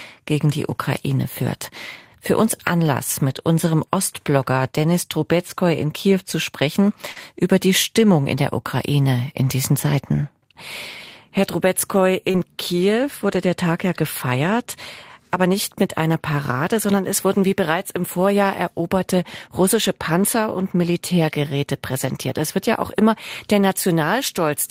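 At 3.29 s the speech turns briefly rough and noisy through about 3.44 s: a lost packet rebuilt from error correction. The packet after the missing one carried a low-bitrate copy, and the decoder played that copy for roughly 20 ms instead of leaving a gap. Inside that stretch, at 3.33 to 3.37 s, there is also a short concealed packet loss. About 20 ms of audio never arrived and about 14 ms was synthesised by extending the preceding sound, which leaves a brief smear before the real signal resumes.

Between "zu sprechen" and "über die", at 7.12 to 7.18 s, a second short concealed packet loss covers about 36 ms. The decoder bridges the hole by continuing the last sound, heard as a brief wobble. From 7.16 to 7.18 s the final 20 ms comes from the error-correction copy, so the join back into clean audio is grainier.

The same pairing occurs at 12.32 to 12.36 s. About 23 ms is concealed as a short smear, and the last 20 ms, from 12.34 s, is an error-correction rebuild with its coarser texture.

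At 13.34 to 13.36 s a lone 20 ms frame is rebuilt from error correction, a rough patch with no dropout.

From 22.02 to 22.08 s the rebuilt audio runs to about 40 ms. That points to two lost packets, each restored from the low-bitrate copy in the packet that followed. It is the most rebuilt audio in any one spot in the clip, though the audio stays continuous.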